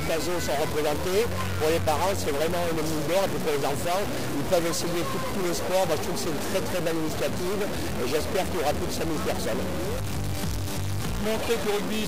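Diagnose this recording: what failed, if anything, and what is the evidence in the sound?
Harsh, buzzy distortion runs through the whole thing, and the quiet stretches aren't quiet at all. They're filled with a steady buzzy noise sitting somewhere around -25 dBFS. That pattern points to a stuck bit, likely a broken data line or a fault at the converter. About half the samples land off by that bit's weight, depending on the waveform, and because the bit also flips with the sign of tiny values, even the pauses buzz fairly loudly.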